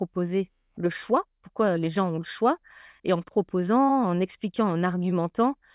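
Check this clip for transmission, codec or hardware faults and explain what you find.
No transmission, codec or hardware faults turn up here.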